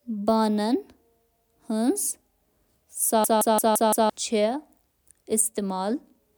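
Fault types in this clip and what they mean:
System hang loop: from 3.24 to 4.10 s, a 171 ms slice of speech repeats five times at about 5.9 Hz as the frozen system replays its ring buffer.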